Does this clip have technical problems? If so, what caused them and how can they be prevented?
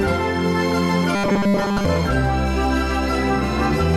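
Yes. From 1.15 s to 1.85 s the sound turns into a rigid, metallic buzz at 200 Hz. This is robotic sound from repeated short buffers. The likely cause is audio arriving too late, so the software loops the last chunk instead of playing new material. A 200 Hz buzz fits a repeated 5 ms buffer. Most of that stretch is repeats, and the real audio underneath is skipped. Larger buffers and a less loaded processing thread prevent the starvation.

From 2.66 s to the end, a steady 1 kHz tone sits under the sound at about 30 dB below it. This is USB whine. The bus pulls current in 1 ms frames, and that pulse leaks through shared power or ground into the analogue path. Its pitch stays fixed because the frame rate never changes. Its strongest component is the 1 kHz fundamental. A powered, isolated hub or a ground-loop isolator keeps the bus current out of the audio.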